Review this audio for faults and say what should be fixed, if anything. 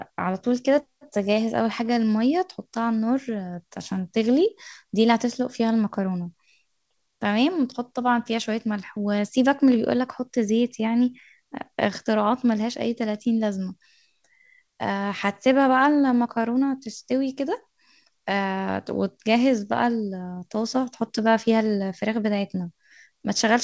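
No faults found in this speech; nothing needs fixing.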